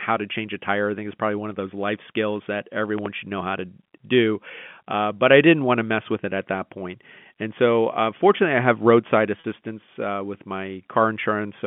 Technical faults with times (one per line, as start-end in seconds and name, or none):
2.98-3.08 loud pop
9.40-9.44 packet loss with pitch repetition